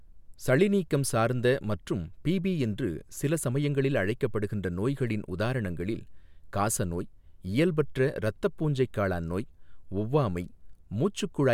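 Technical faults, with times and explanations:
No technical faults found in the speech recording.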